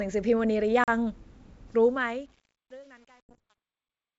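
At 0.84 s there is packet loss on an ADPCM call. About 40 ms of speech drops out, which suggests a few packets. The gap is filled with silence and has hard edges. The ADPCM decoder's predictor and step size lose track of the sender's during the gap. The speech returns through a decoder that must re-converge before it matches again.

From 1.68 s the speech fades out toward the end. Over this fade there is truncation distortion. The level stage keeps only 9 bits and adds no dither. As the fade gets quieter, the waveform falls onto a few coarse steps. From 2.14 s to the end this is at its worst. The tail sounds gritty.

At 3.26 s there is a second packet loss, lasting until 3.39 s. About 60 ms is missing, pointing to several packets. It is another hard-edged silent hole. The decoder again has to resynchronise after it.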